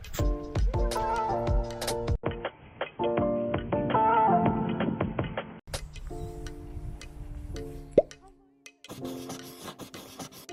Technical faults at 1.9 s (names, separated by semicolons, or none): repeated frames